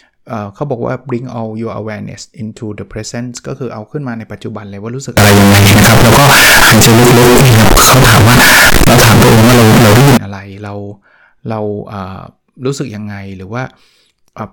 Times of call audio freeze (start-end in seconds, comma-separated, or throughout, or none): none